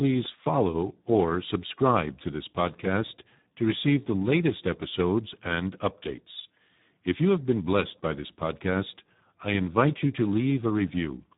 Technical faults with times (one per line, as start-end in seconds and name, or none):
0.00-11.37 Speex codec